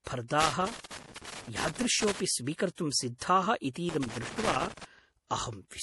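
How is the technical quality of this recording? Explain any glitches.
The technical quality is poor. The speech is dull and smeared, with two bursts of crackle.

Throughout, the speech sounds muffled and swirly, with nothing above 11.5 kHz. This is likely low-bitrate audio saved at a high bitrate: an MP3 encoded at around 48 kbit/s and later re-saved at a higher rate, which cannot restore what was discarded.

From 0.40 to 2.20 s and again from 3.89 to 4.85 s, irregular scratchy crackle cuts through the speech. This is loose connector crackle, where a worn or dirty contact repeatedly breaks and remakes the signal path.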